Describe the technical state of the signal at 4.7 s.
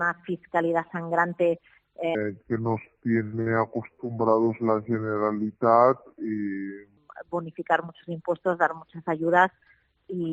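At 4.7 s the signal sits inside a section at the wrong speed, running from 2.15 to 6.97 s, likely because it was played against a mismatched clock at 0.671 times normal speed. Everything there sounds slowed and dragged, dropping about seven semitones in pitch.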